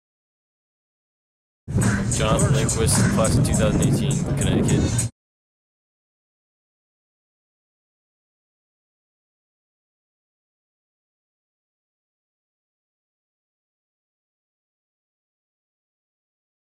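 A short burst of burbling rides over the sound from 2.2 to 2.26 s. It is DAB burbling: weak reception let stray bit errors past error correction into the MP2 audio data, so wrong samples put short blips of noise in single sub-bands.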